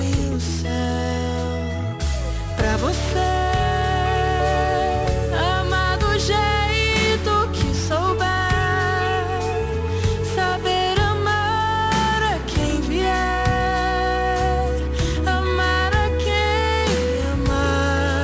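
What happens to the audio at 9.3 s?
Aliasing is present at 9.3 s, as it is throughout the clip. The sound points to a drop to a 16 kHz sample rate without an anti-alias filter, so content above 8 kHz folds back down as false, unrelated tones roughly 20 dB below the signal, leaving highs gritty and metallic.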